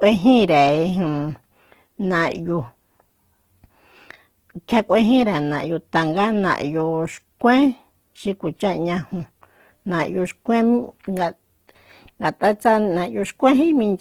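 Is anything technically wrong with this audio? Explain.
Yes. Throughout the whole speech clip there is plainly audible Opus compression damage. The bandwidth stays fullband, extending to about 20.1 kHz, but the texture points to the likely cause: the encoder running in its CELT music mode at a low rate, which fits something near 16 kbps. Short of bits, it preserves each band's energy but refills band detail by folding lower bands or inserting noise. The speech therefore sounds rough, grainy and noisy rather than hollow or swirly.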